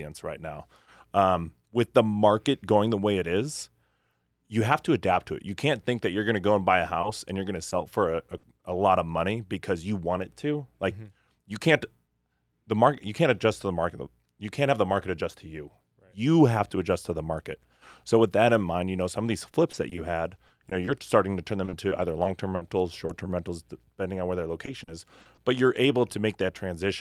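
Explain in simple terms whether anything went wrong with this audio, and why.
Packet loss on the call caused three kinds of fault in the speech.

Short concealed packet loss happens at 7.01–7.05 s, just after "go and buy a" and before "and you're going to", again at 7.69–7.73 s, and at 23.07–23.11 s. Each time about 20 ms of sound went missing and the receiver patched it by continuing the last sound. You hear a brief smear or wobble rather than a gap.

A burst of packet loss comes at 8.37–8.45 s. About 60 ms went missing, enough that the patch is heard as a held buzz or a fading hiss before the speech picks up again further on. It is a single, longer hole than the short losses.

Repeated packet loss (robotic sound) fills four stretches: 19.51–19.99 s after "know some of these", 20.35–20.89 s, 21.65–22.63 s, and 24.65–25.39 s after "depending on where their". Each stretch has four or five patched holes of up to 60 ms, so the speech turns choppy with pieces missing instead of having one isolated glitch.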